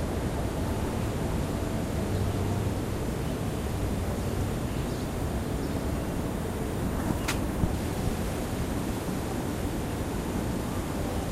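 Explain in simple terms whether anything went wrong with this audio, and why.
Nothing went wrong here.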